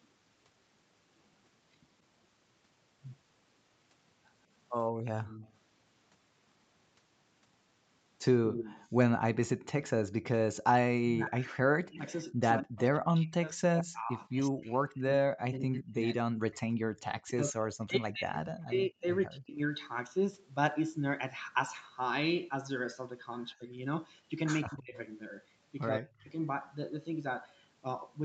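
From 4.98 to 5.53 s and again from 8.5 to 9.68 s, a delayed copy of the speech trails the talker by 172 ms. This is echo leak, likely from a loudspeaker on the far side whose echo canceller let some of the pickup through. The first copy sits about 20 dB below the speech and the second is stronger, about 10 dB below. On a spectrogram the harmonic bands appear twice, the weaker set offset 172 ms to the right. The waveform shows a small ghost envelope behind each syllable.

From 10.45 to 19.59 s the speech is suppressed in double talk, likely because the canceller heard both sides at once and turned everything down. Over about seven seconds of that span the level repeatedly drops, at its deepest by around 40 dB, so the speech pumps and cuts out in pieces. The waveform collapses into hollow gaps, and the spectrogram shows vertical bands of near-silence where the harmonics and upper frequencies vanish.

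Two more brief echo scraps appear inside that stretch. One runs from 11.92 to 12.11 s at about 20 dB down, and the other runs from 17.13 to 17.22 s at about 30 dB down. Both have the same 172 ms delay.

Short suppression dips return at 23.54–23.72 s, 24.65–24.97 s and 25.98–26.3 s. They cut the level by roughly 20, 25 and 30 dB, and each shows as a notch in the waveform and a brief dark gap on the spectrogram.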